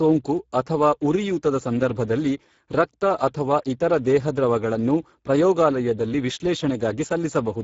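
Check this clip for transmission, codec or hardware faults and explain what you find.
One codec fault runs through the whole clip. Speex codec damage is plainly audible throughout. Its CELP coder has few bits for the excitation, consistent with about 10 kbps, so speech turns noisy and hoarse. Nothing sounds above 7.6 kHz.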